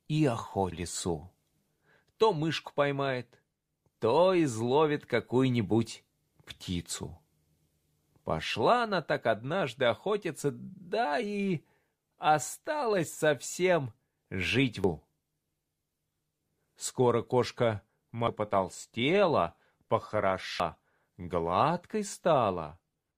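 At 0.72, 3.69, 14.84, 18.28 and 20.60 s, damaged data in a compressed stream makes the decoder lose frame sync, giving a brief chirp, squawk, click or short hole.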